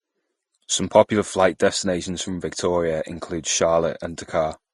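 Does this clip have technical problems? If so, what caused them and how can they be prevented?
Yes. Throughout the speech there is nothing above 12 kHz, and artefacts from two codecs sound together. This points to transcoding between lossy codecs, likely Vorbis at 32 kbit/s followed by Opus at 48 kbit/s. Opus spent bits on Vorbis damage. Encode once from the original source.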